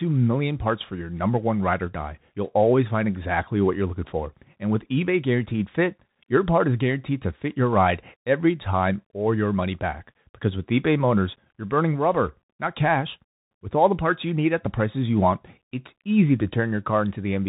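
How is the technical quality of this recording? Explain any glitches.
Poor: the whole recording passed through a Bluetooth CVSD headset codec, likely a 64 kbps link. Its one-bit slope coding removes everything above 3.8 kHz, roughens s sounds and leaves granular hiss.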